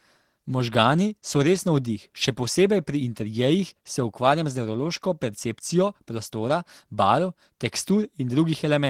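No technical faults are audible anywhere in the speech.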